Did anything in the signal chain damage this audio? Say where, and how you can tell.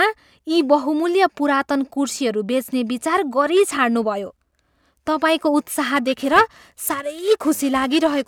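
Yes, periodic clock jitter at the converter from about 5.96 s to the end: a metallic edge on the speech from sidebands spaced roughly 1 kHz, as interference wobbles the sampling clock.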